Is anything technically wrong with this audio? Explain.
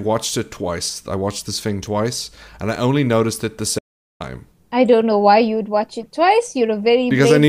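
Yes. An audio dropout to silence runs from 3.79 to 4.20 s: after "only noticed it the", 0.41 s goes dead silent, with no room tone, until "i don't know why". The input was likely lost through a disconnect, failed link or mute while recording continued.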